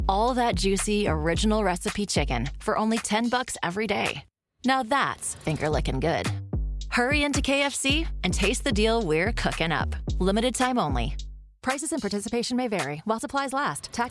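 No technical faults can be heard anywhere in this audio.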